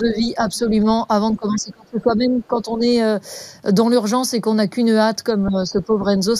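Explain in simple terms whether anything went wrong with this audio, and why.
Two things went wrong. Throughout, the speech has a hollow, slightly phasey tone. This is channel delay (comb filtering): one channel arrives a tiny fraction of a millisecond late, and when the two are combined, certain evenly spaced pitches cancel, starting around 3 kHz. Unlike echo or reverb, the sound never repeats; only the tone changes.

The voice also dips three times: from 0.0 to 0.73 s, from 1.34 to 2.84 s, and from 5.32 to 6.16 s. The middle dip is by far the deepest, nearly cutting the voice out. The likely cause is speech suppressed in double talk, where an echo canceller turned the talker down while someone else spoke. Unlike steady filtering, these are timed drops.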